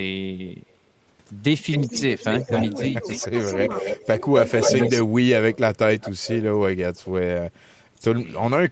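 A speech recording carried over a call, with nothing above 8 kHz, and it has two faults. The first is an echo leak. From 1.6 to 5.03 s a delayed copy of the speech returns about 265 ms late, only slightly quieter than the direct sound. A shorter, weaker return follows from 5.98 to 6.44 s, about 311 ms behind and clearly softer. The likely cause is a far-end loudspeaker whose echo canceller let some of the sound back into its microphone. The second fault is speech suppressed in double talk. The talker's level dips briefly by about 10 dB inside 1.87 to 3.33 s, and again for a moment at 4.16 to 4.22 s. From 4.75 to 5.58 s it drops hard, close to silence. These dips overlap the echo, which fits a canceller that likely mistook overlapping sound for echo and turned everything down.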